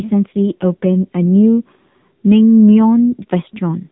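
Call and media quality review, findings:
AMR narrowband mobile codec, whole clip. Speech sounds boxy and buzzy, nothing above about 3.8 kHz, thin synthetic edge on voicing. Heavy damage fits a low AMR-NB mode near 6.7 kbps, few pulses per frame to drive the vocal-tract model. Phone-path encoding, basically.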